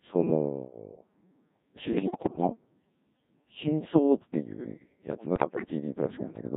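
Throughout, the speech carries the sound of a Codec 2 vocoder. The heavy buzz and thin detail fit a rate near 1.6 kbit/s. Only pitch, voicing, level and a coarse spectral outline survive. The decoder rebuilds the voice from sine waves, so it sounds robotic.

From 1.92 to 2.47 s, and again from 5.36 to 5.70 s, bit errors on digital voice radio break in. Corrupted bits reach that low-rate stream. The first burst fits about 7 percent of bits flipped, and the second about one in ten. Pitch, level and tone jump frame to frame. The voice dissolves into warbles and bleeps.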